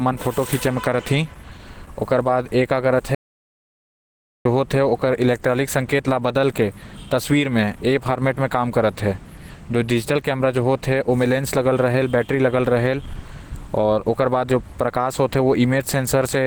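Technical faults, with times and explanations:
Throughout, Opus compression: the speech sounds rough, grainy, muffled and hoarse, plainly damaged, with energy still reaching near 20 kHz. This points to a low rate around 16 kbps in hybrid mode, which fills starved bands with folded or noisy content instead of leaving swirling holes as MP3 does.
3.15 to 4.45 s, audio dropout to silence: the speech cuts off abruptly and returns mid-flow after about 1.3 s. The gap is silent with no room tone, unlike a quiet pause, likely because the input was lost while silence kept being written.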